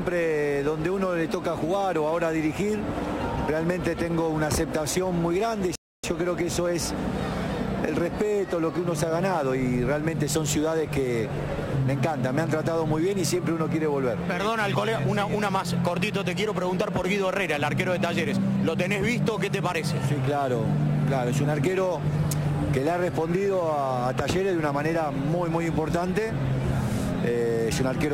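At 5.75 s the sound cuts out for about 280 ms, then carries on: a playback stall, likely the player starving for data or its thread getting blocked.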